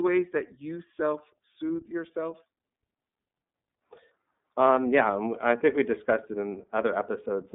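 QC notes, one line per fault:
Throughout: iLBC codec. The speech is squeezed into a narrow telephone band of roughly 200 Hz to 3.6 kHz, with nothing above 3.7 kHz, and the codec damage is plainly audible as a rough, slightly synthetic quality. Each 30 ms frame's excitation is coded on its own, which fits the 13.33 kbps mode. On a spectrogram the energy stops sharply at a flat ceiling near 3.7 kHz and thins below 200 Hz, with blocky, smeared harmonics.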